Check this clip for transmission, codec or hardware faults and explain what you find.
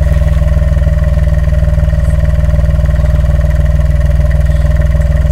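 One fault runs through the whole clip: hard clipping. The signal is pushed about 2 dB beyond what a stage can pass, so a small fraction of the loudest peaks are sliced flat. Those squared-off tops add high harmonics, heard as brief crackle on peaks. The crackle's sharpness and its confinement to peaks set it apart from soft saturation or codec smearing.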